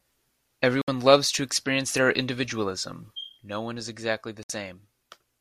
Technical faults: digital broadcast dropout; sudden gain jump

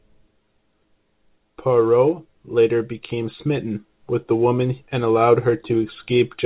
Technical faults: none

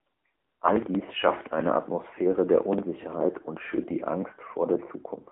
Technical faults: AMR narrowband mobile codec

